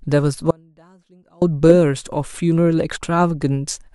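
At 0.51 s the speech cuts abruptly to a faint residue, about 35 dB below normal level, and snaps back at 1.42 s. This audio dropout, likely a brief break in the signal path, differs from a pause or fade by its hard edges and faint residue.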